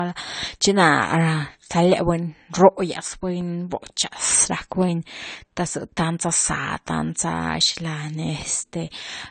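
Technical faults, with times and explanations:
Throughout: low-bitrate audio saved at a high bitrate, likely an earlier low-bitrate encode carried into a high-bitrate MP3, leaving speech dull with nothing above 9 kHz.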